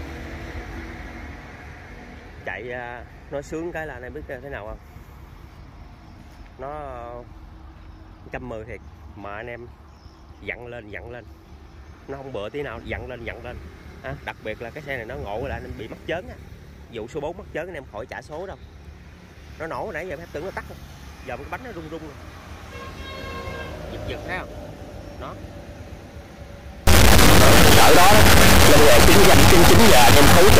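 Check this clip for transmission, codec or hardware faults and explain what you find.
One fault is present, an integer read as float, from 26.87 s to the end at 30.6 s. The 32-bit integer samples are interpreted as 32-bit floats, so values land near zero or far past full scale, producing a harsh, extremely loud buzzing square wave that drops to silence in very quiet passages. The waveform slams between zero and the clipping rails, and the spectrogram fills with broadband vertical energy.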